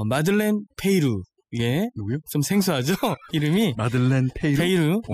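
Overdone noise removal runs through the whole clip: a noise reduction stage was pushed far too hard on a noisy speech recording, so any frequency band sitting close to its noise estimate gets pulled right down or switched off, and the quieter parts of the voice are taken out along with the noise. What remains between phrases is near silence dotted with twinkling, chirpy specks.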